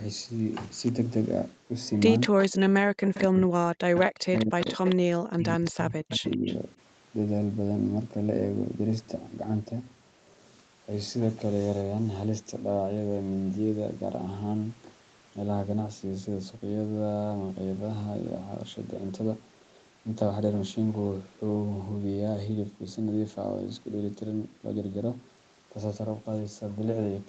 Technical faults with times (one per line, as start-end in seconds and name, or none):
1.87-2.48 echo leak
2.29-2.37 speech suppressed in double talk
3.14-3.24 echo leak
3.21-6.46 speech suppressed in double talk
3.95-4.02 echo leak
4.33-4.96 echo leak
5.65-5.71 echo leak
6.09-6.57 echo leak